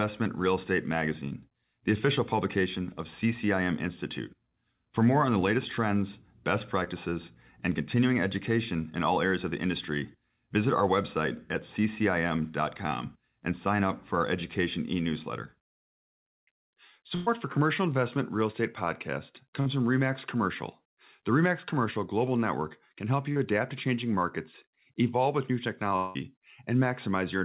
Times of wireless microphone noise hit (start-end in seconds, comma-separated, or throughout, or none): none